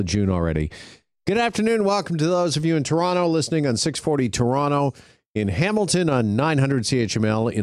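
No technical faults can be heard anywhere in this speech.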